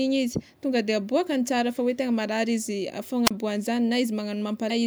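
At 3.25 to 3.31 s, a wireless microphone squelch dropout occurs: the FM signal fades, the receiver's squelch mutes for about 31 ms, and a brief rise of hiss leads into a hole of near silence. At 4.67 to 4.71 s, damaged data in the compressed stream makes the decoder lose sync, producing a short glitch.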